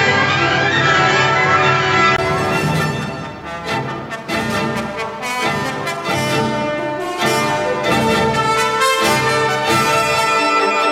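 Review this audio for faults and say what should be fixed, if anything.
Input switched to a poorer device, 0.0 to 2.18 s: dull sound with nothing above 7.6 kHz, then a brief gap at 2.18 s, likely the device change. Lock the recording input to the intended microphone and turn off automatic device switching before recording.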